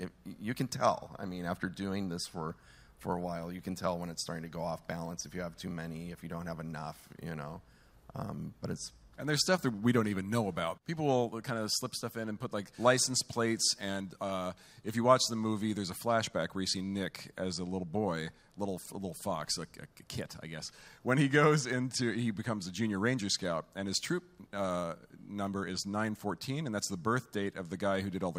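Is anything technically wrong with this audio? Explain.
No, nothing technically wrong can be heard here.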